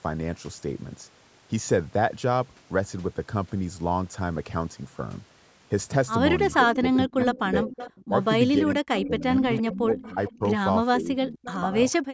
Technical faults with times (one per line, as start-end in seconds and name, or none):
6.61-8.13 speech suppressed in double talk
6.94-7.39 echo leak
7.73-8.24 echo leak
8.58-10.42 speech suppressed in double talk
9.54-10.33 echo leak
10.98-11.75 speech suppressed in double talk
11.43-11.59 echo leak
12.03-12.14 background gated by the echo canceller